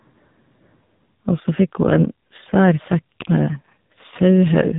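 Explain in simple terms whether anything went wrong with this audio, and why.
Yes, something went wrong. The whole recording went through the AMR narrowband mobile codec, the squeeze used on older phone calls. Nothing above about 3.8 kHz survives, so the speech sounds thin and muffled. Heavy compression also makes it buzzy and robotic.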